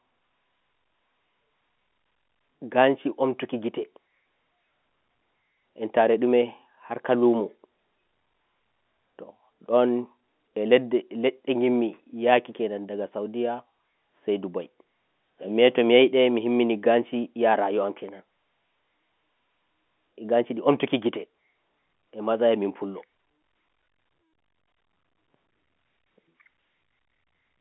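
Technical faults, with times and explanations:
No technical faults are present.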